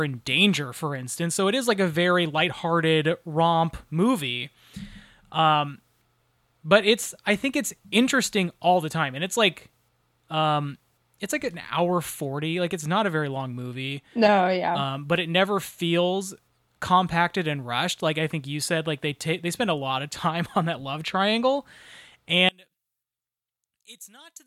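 From 22.49 s to the end at 24.47 s, the speech suddenly drops by about 25 dB, leaving only a faint residue. This is likely one channel inverted: with reversed polarity, the centred speech common to both channels cancels when they are summed to mono.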